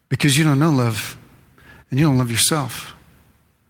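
No technical faults can be heard anywhere in the recording.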